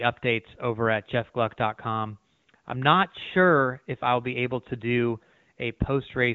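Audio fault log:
Nothing stood out on listening to this speech recording.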